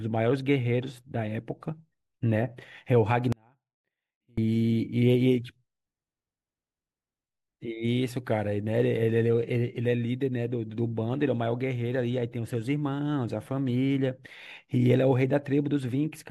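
An audio dropout to a faint residue runs from 3.32 to 4.38 s. For just over a second the speech vanishes abruptly, mid-flow rather than at a natural pause, and what remains is only a faint trace of the signal, roughly 35 dB below its normal level. It then returns just as suddenly. The cause is likely a brief loss of the main signal feed while the downstream path stayed live, letting a small leak through.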